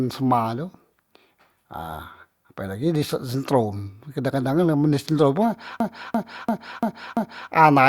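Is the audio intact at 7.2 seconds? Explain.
No. At 7.2 seconds you're inside a system hang loop running from 5.80 to 7.51 s. The machine froze while the hardware kept replaying one 341 ms chunk of speech, which fits a 16384-sample buffer. It repeats five times at about 2.9 Hz, a stutter.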